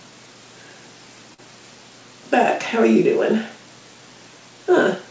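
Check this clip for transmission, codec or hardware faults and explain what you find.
One transmission fault is audible, carried over a call path whose content stops at 8 kHz, which fits a wideband call codec such as G.722.

Short concealed packet loss, 1.34 to 1.40 s: 40 ms of audio did not reach the decoder in time, so the receiver patched the gap by stretching out the sound that came just before it. It continued the pitch where that sound was tonal, or substituted shaped noise where it was not, then crossfaded back into the real signal. You hear a brief smear or wobble there, and whatever genuinely occupied those 40 ms is missing.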